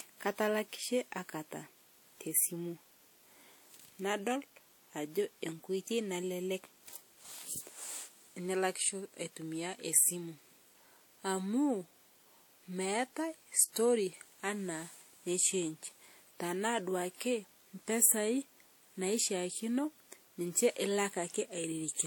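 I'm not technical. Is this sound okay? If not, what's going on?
No. Throughout the speech there is a layered quality, the kind of roughness that comes from the likely cause: transcoding between lossy codecs. The sound was squeezed by one compression format and then re-squeezed by another, which fits an AAC-type encoding followed by WMA. The second stage wastes effort on the first stage's damage and adds its own, so both sets of flaws are heard together. Nothing is present above 18.5 kHz.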